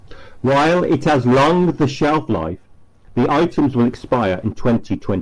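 No technical faults are audible.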